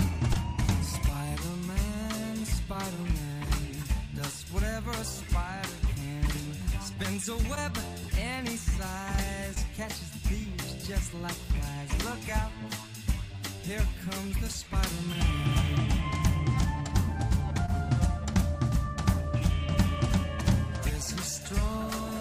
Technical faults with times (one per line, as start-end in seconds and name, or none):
0.33-0.37 short concealed packet loss
7.55-7.58 short concealed packet loss
9.54-9.58 short concealed packet loss
17.66-17.70 short concealed packet loss